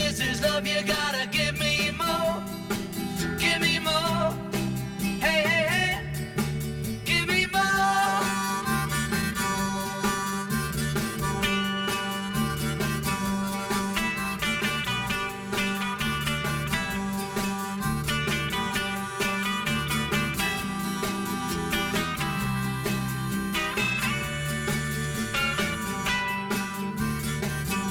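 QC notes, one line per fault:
Throughout: channel delay (comb filtering). One channel arrives roughly 5 ms behind the other, and once the two are folded to mono, the content they share cancels at regularly spaced frequencies. The lowest notch sits around 100 Hz, with further notches about every 200 Hz above it. The result is a steady hollow, phasey colouration that stays fixed for the full length of the clip.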